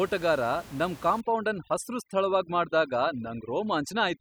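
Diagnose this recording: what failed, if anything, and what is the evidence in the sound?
From 1.21 s to the end at 4.21 s the background collapses into near silence scattered with twinkling specks. This is overdone noise removal at the call-processing stage. The suppressor had a room noise floor about 20 dB below the speech to work against. It gated individual frequency bands hard whenever they came close to its noise estimate, so the quieter parts of the speech were stripped out along with the room noise.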